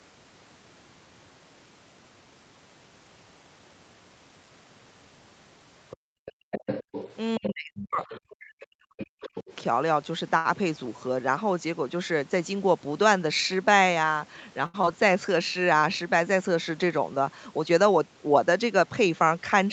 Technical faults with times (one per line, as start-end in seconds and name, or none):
5.90-8.19 other side's voice leaking through
5.97-6.51 background gated by the echo canceller
7.39-9.45 speech suppressed in double talk
8.99-9.55 other side's voice leaking through
10.37-10.47 short stall from a late packet
14.66-14.76 short stall from a late packet
14.82-14.85 short concealed packet loss